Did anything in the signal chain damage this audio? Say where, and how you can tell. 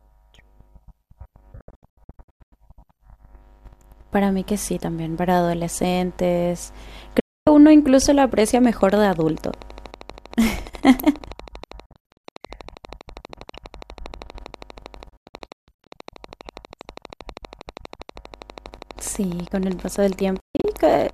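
Yes. A digital broadcast dropout hits at 1.61–2.53, 7.20–7.47, 11.86–12.25, 15.10–15.87 and 20.40–20.65 s. The sound mutes within about 3 ms, often in several short holes up to 144 ms long. This points to the receiver discarding corrupted frames and staying silent until clean ones arrive.

A train of clicks runs from 8.4 s to the end at 21.1 s. It has about 150 similar ticks at a regular 12.4 per second, peaking near the level of the speech and audible in pauses too. The likely cause is interference coupling into the analogue wiring or a faulty connection or power supply.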